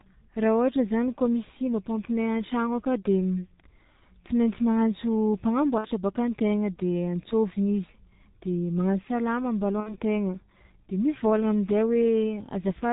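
Across the whole recording the speech is muffled and hoarse, with nothing above 4 kHz and smeared consonants. That fits the G.723.1 codec at about 6 kbit/s, whose slow voice model blurs detail rather than adding watery swirls. At 5.78 to 5.87 s, and again at 9.80 to 9.95 s just after "de magnasa lamba", VoIP packet loss concealed by the speech codec stretches the voice into a fading buzzy tone or coloured noise. Each gap matches about 60 ms of missing audio, likely two 30 ms frames. Unlike a silent dropout, the decoder extrapolates the last sound, and it stays weak briefly after returning.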